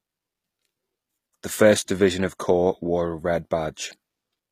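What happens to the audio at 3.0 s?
At 3.0 s the speech carries the same HE-AAC compression damage heard across the whole clip, not a separate event. The treble is plainly coloured: sibilants sound gritty and metallic, and the top end has a synthetic, lispy sheen. That points to the likely cause: spectral band replication, which copies lower bands upward under a coarse envelope so the rebuilt harmonics fail to line up, consistent with HE-AAC v2 at roughly 24 kbps.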